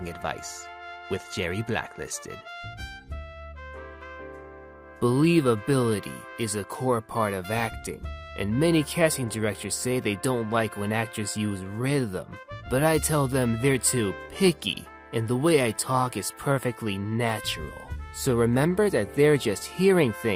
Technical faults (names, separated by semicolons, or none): clock drift between sender and receiver; repeated timing corrections